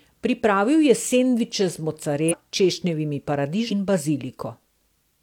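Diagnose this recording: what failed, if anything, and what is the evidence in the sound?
The fault sits at the codec decode stage: compressed frames skipped. The speech jumps forward twice, at 2.28 to 2.34 s and at 3.67 to 3.72 s. The first jump loses about 0.3 s of speech, and the second about half a second. Both gaps fit whole multiples of a 46.4 ms frame, pointing to runs of frames missing from the file or rejected as damaged by the decoder.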